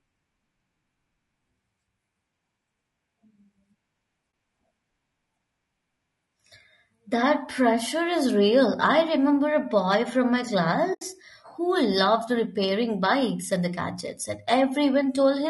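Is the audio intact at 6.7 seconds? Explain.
No. At 6.7 seconds, as throughout the speech, the sound is rough and grainy, with noise filling the gaps between harmonics and a thin, synthetic-sounding top band. The likely cause is low-delay AAC compression (AAC-ELD), whose short frames resolve pitch harmonics poorly. The damage fits a bitrate around 32 kbps.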